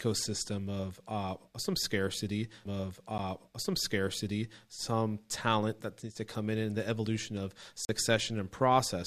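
Twice the output dropped to blocks of digital silence: a 10 ms gap at 3.18 s, heard as a tick before "some scarcity some talent", and a 40 ms hole from 7.85 to 7.89 s after "and the evolution of".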